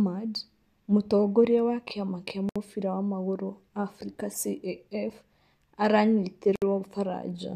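At 2.49 to 2.56 s the speech drops into a silence of about 65 ms, and at 6.56 to 6.62 s a second silence of about 64 ms opens. These are gaps at a join of encoded pieces, recurring every 4.0 s. Each piece was encoded separately and joined untrimmed, so encoder start delay and last-frame padding remain. Both silences have smeared edges, and the speech resumes exactly where it stopped.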